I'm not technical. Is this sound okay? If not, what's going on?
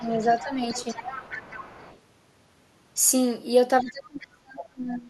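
No. There is other side's voice leaking through, faint at 0.00 to 0.46 s and 3.80 to 3.91 s, clearer from 0.69 to 1.99 s, likely the loudspeaker's sound reaching the microphone. There is also speech suppressed in double talk, a slight dip from 0.43 to 0.76 s and heavy cutting out from 3.82 s to the end, likely because both sides talked at once.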